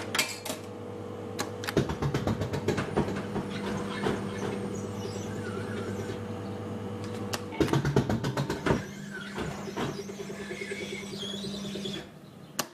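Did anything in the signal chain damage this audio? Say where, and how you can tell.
Yes: doubled audio track, 3.08 to 4.74 s. A dry copy about 5 dB quieter trails by roughly 400 ms and cuts in and out abruptly, likely a second, slower capture path.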